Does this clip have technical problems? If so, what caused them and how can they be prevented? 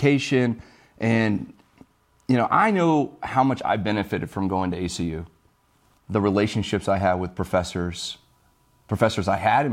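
No, the recording has no technical problems that can be heard, so nothing here needs preventing.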